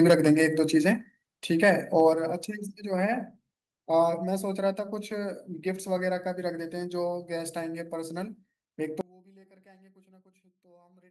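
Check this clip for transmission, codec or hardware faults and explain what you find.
Three faults are present: microphone overload at the start, the microphone volume stepped down three times, and an audio dropout to a faint residue that runs to the end.

Microphone overload, 0.01 to 0.45 s: the input level was likely set too high, driving peaks about 8 dB past the converter's limit. A small share of samples, around 2 percent, have their tops flattened, giving the loudest syllables a harsh, crackling edge.

Microphone volume stepped down, at 0.11 s, 1.11 s and 2.13 s: the call software likely reacted to that overload by cutting the device's input gain in single steps of about 2, 3 and 5 dB. Voice and background drop together each time, abruptly rather than smoothly.

Audio dropout to a faint residue, 9.01 s to the end: the wanted signal was likely lost while the path after the break stayed live. 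The sound cuts out suddenly, leaving only a faint trace about 30 dB below its normal level, not a natural pause or fade.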